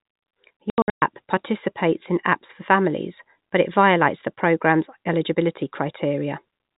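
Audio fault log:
0.70–1.02 s, packet loss filled with silence: about 260 ms of audio drops out in hard-edged gaps, the longest 120 ms, just before "participates in apps for". Missing packets were replaced by silence, so the speech has holes.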